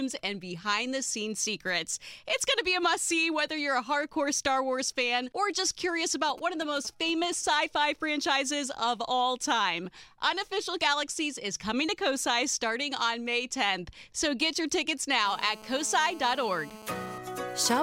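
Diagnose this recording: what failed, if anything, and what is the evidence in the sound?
From 6.29 to 7.34 s a galloping dit-dit-dit of short raspy buzzes cuts across the sound, well below the level of the signal. These are GSM signalling bursts, a fault in the analogue stage. A 2G phone nearby sent brief groups of transmissions while exchanging control traffic with the network. Wiring or an input stage in the audio path rectified each radio pulse, and the pulses inside each group repeat at 217 Hz.

From 15.25 to 17.18 s a hard, continuous buzz at 217 Hz sits about 18 dB below the signal, rich in harmonics and unrelated to the sound it overlays. This is GSM phone buzz, again in the analogue stage. The nearby phone was in a call, transmitting steadily at 217 bursts per second. A poorly shielded or unfiltered part of the audio circuit demodulated that RF envelope into the audible, steady rasp.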